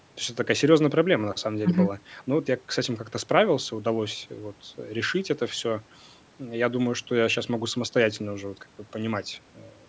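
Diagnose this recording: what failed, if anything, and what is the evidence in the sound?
Nothing failed; no faults heard.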